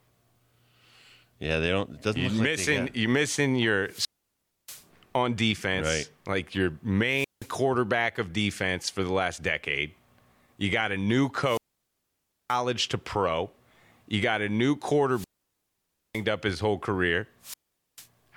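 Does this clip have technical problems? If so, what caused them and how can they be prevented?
Yes. Wireless microphone squelch dropouts occur at 3.84–4.86, 7.06–7.55, 11.43–12.59, 15.10–16.25 and 17.41–18.07 s. The radio signal fades, hiss rises, and squelch mutes audio for up to 0.93 s. Prevent them with line of sight, good antenna placement and a clear frequency.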